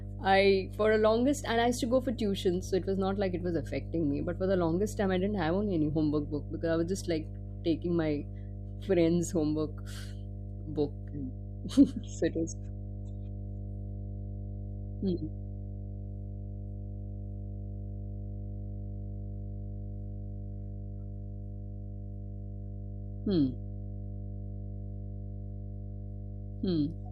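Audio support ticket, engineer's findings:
Mains hum, 50 Hz, present throughout the speech and fairly loud against it. Steady pitched tone with low harmonics, unlike broadband rumble. Probable ground loop or nearby transformer.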